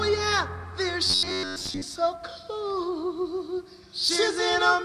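Robotic sound from repeated short buffers, 1.07 to 1.83 s: a rigid 93.8 Hz metallic buzz, likely from one 10.7 ms fragment looping over most of the missing audio.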